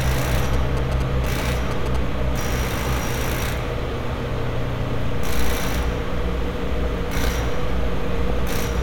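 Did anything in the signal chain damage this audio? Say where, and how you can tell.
Yes. GSM signalling bursts: a nearby 2G phone's radio bursts were rectified in the analogue wiring, producing a galloping dit-dit-dit of short 217 Hz buzzes from 0.45 to 1.97 s, about 10 dB below the sound.

DAB burbling: weak reception let bit errors through into the MP2 codec data, so wrong samples put short blips of noise into single sub-bands at 5.60 to 5.64 s and 8.28 to 8.52 s.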